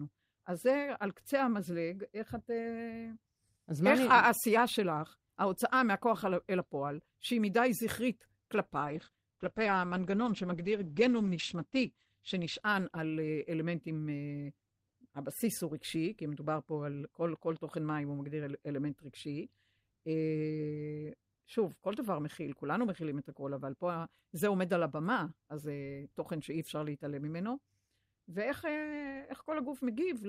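A call bitrate drop hits this speech clip from 8.81 to 14.31 s: the encoder falls from 48 to 14 kbps, bottoming out for 3.19 s, narrowing bandwidth from 20 kHz to 8 kHz, so the sound turns coarse and muffled.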